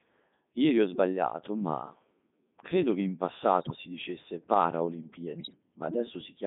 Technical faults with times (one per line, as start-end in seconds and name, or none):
0.00-6.46 Codec 2 vocoder
3.61-3.76 bit errors on digital voice radio
5.38-5.57 bit errors on digital voice radio